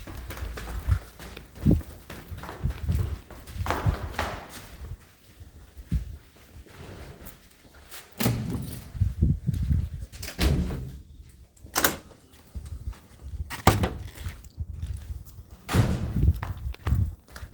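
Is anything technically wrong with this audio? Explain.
No, there's nothing technically wrong with this audio.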